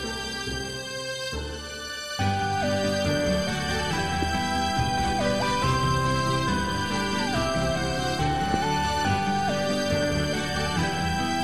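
Loud pops occur at 4.22 to 4.37 s as a quick pair, then singly at 8.54 to 8.56 s, peaking roughly 10 and 15 dB above the sound. A voltage step, likely from a plug, switch or static discharge, punches through as a sharp thump while the audio continues underneath.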